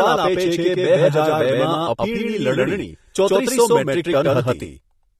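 From the first moment to the end, every sound in the speech arrives twice: a second full-band copy trails the original by roughly a tenth of a second at about the same level. This doubled audio track has no decay or room colouring, so it reads as a hard slapback rather than an echo. The likely cause is the same signal reaching the mix a second time through a slower path, or two copies left out of step in an edit.

Throughout the clip there is also plainly audible AAC compression damage. Nothing is present above 13.1 kHz, which dulls consonants and takes the air off the top, and sustained sounds and sibilants carry a warbling, fizzy texture where the codec has thinned or patched parts of the spectrum. This is likely AAC-LC coding at a low bitrate, consistent with something around 32 kbps, where the encoder drops detail it judges inaudible.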